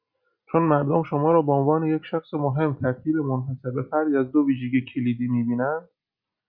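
No technical faults can be heard anywhere in the recording. Nothing in the audio calls for a time or a measurement.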